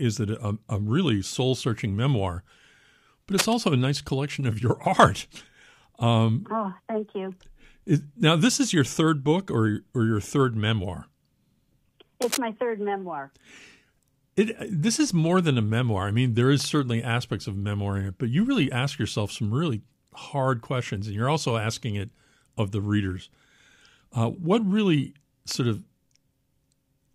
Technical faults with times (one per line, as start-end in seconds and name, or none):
3.32-3.54 cable scratch noise
12.22-12.37 cable scratch noise